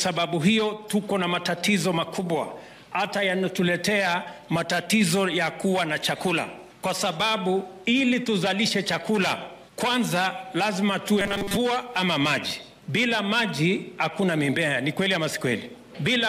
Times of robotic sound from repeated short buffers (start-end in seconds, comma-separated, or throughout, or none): 11.21-11.57